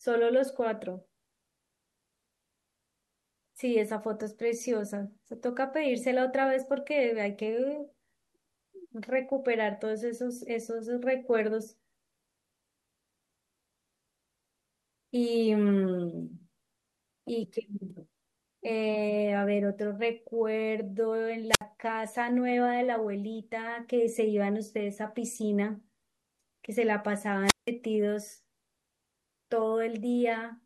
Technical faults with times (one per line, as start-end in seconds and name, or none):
21.49-21.62 wireless microphone squelch dropout
27.44-27.70 wireless microphone squelch dropout